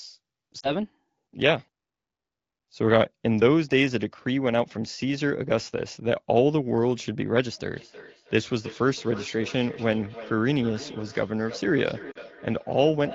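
From 0.59 to 0.75 s, two lost AMR speech frames (about 40 ms of audio) fail their check. The decoder stretches the last good pitch and vocal tract settings while lowering the gain, so the sound warbles, dips, then returns briefly rough. On a spectrogram the harmonics run flat and fade; the waveform envelope sags.

From 7.73 s to the end, feedback echo between two devices sets in. A second device in the room replays the call, and its sound re-enters the microphone outside the reach of the echo canceller. Each syllable returns roughly every 300 ms, at most about 16 dB below the direct sound, thinner and more ringing with each pass. A spectrogram shows faint, evenly spaced ghost copies trailing each burst, and the waveform carries decaying tails.

At 12.11–12.18 s, another pair of lost AMR speech frames, again about 40 ms, produces the same quick drop toward silence and rough recovery. The spectrogram shows a short smeared patch with flattened harmonics.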